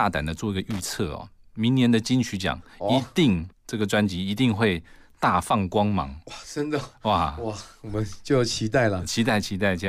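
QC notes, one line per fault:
0.71 to 0.94 s, loose connector crackle. A short, irregular burst of crackle and scratching breaks into the speech for about a quarter of a second. A worn or dirty contact in the signal path is making and breaking contact very quickly as it shifts. Each break chops the signal for an instant. Any DC on the line turns the make-and-break into pops. Together these give the ragged, scratchy texture heard here.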